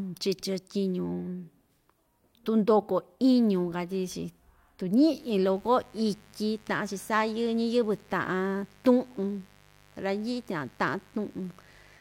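Sharp switching spikes from the 50 Hz mains supply leak into the signal path from 5.16 s to the end, producing mains buzz: a steady, raspy tone rich in harmonics reaching several kilohertz, sitting roughly 30 dB below the speech.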